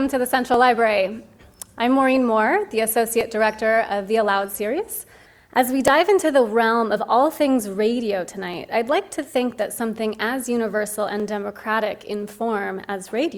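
The audio carries a regular click roughly every 2.67 s, heard about five times between 0.54 s and 11.2 s. The likely cause is clock drift buffer slips. Two devices running on separate clocks, mismatched by a few hundred parts per million, let the buffer between them drift until it overflows or runs dry. Each time, a block of a few tens of samples is dropped or repeated, and that discontinuity in the waveform produces the click.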